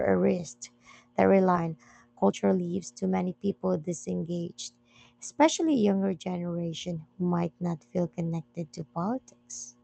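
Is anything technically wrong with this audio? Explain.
Yes, there are two playback faults on a call path that, judging by the top end stopping near 8 kHz, fits a wideband Opus link.

At 1.55 s there is a skip ahead. About a second of queued speech was dropped, either on the way or by the jitter buffer overflowing, and playback resumed from audio already waiting. The two sides are butted together with no filler, so the speech jumps abruptly and a chunk is simply gone.

From 1.65 to 3.27 s there is a jitter buffer speed-up. Still holding more audio than its target, the buffer repeatedly cut out short pitch-period slices, removing roughly a third of a second in total. The speech runs at 119% speed with unchanged pitch and sounds rushed.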